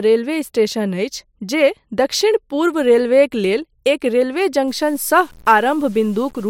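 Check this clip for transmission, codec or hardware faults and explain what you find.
One fault, near the end. From 4.68 s to 6.50 s there is low bit depth without dither, likely from samples truncated to very few bits, which fits about 7-bit resolution. The rounding error tracks the speech, so quiet passages turn gritty and grainy, with distortion roughly 30 dB below the signal.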